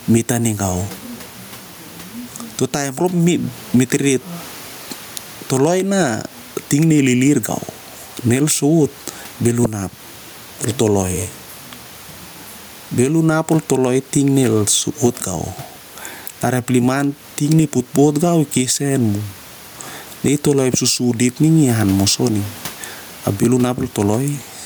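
Throughout the speech, the gain ducks under every loud syllable, with the level swinging around 10 dB, and room noise sits about 33 dB below the voice. This gain pumping likely comes from gain set too high, with a fast limiter clamping down on each peak.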